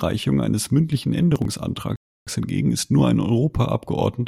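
From 1.32 to 1.52 s, just after "eines mündlichen", processor overload crackle: missed deadlines skip several short chunks, fitting roughly 10 ms buffers, giving gritty clicks seen as vertical broadband streaks.

At 1.96 s a rebuffering stall cuts the speech to silence for 0.31 s, a flat waveform gap, then it resumes intact with "hingegen ist nur ein".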